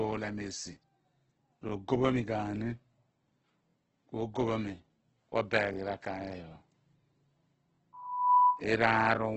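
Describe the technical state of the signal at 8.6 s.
At 8.6 s a steady 990 Hz tone is howling about 10 dB above the speech, in the last instant of a loudspeaker feedback squeal that runs from 7.93 to 8.63 s. It swelled over just under half a second. The microphone was re-amplifying its own loudspeaker until the loop gain at that frequency passed unity.

Underneath, the speech sounds grainy and rough, with nothing above about 8.1 kHz. This is heavy damage from Opus compression, likely at about 12 kbps in its CELT music mode, which fills starved bands with folded or noisy content and narrows the bandwidth.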